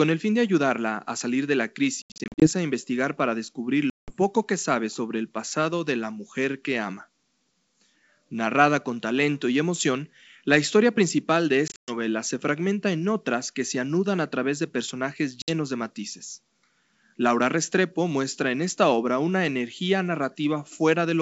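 This speech clip shows packet loss on an ADPCM call, at 2.02–2.48 s, 3.90–4.15 s, 11.68–11.96 s and 15.42–15.52 s. Sound drops to abrupt silence. After "a salir de la" about fifteen packets vanish in bursts. Each return is slightly distorted while the decoder's predictor resynchronises, over G.722 wideband coding.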